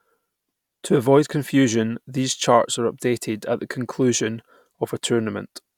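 No technical faults can be heard anywhere in the speech recording; the signal stays continuous and stable throughout.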